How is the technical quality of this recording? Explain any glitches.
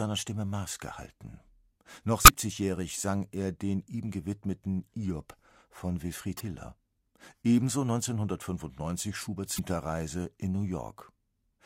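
The speech has three short glitches, all from damaged data in a compressed stream. They occur at 2.24 to 2.29 s, 6.36 to 6.41 s and 9.55 to 9.59 s, each 40 to 50 ms long. Corrupted bytes make the decoder misread frames and search for the next valid header. Each is a brief chirp, squawk, click or hole.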